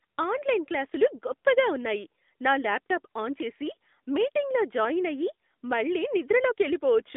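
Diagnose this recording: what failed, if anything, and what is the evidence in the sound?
Codec stage: AMR narrowband mobile codec throughout. Speech sits within 200 Hz to 3.6 kHz with nothing above 3.7 kHz. Its plainly buzzy, modelled texture fits a mid-rate mode.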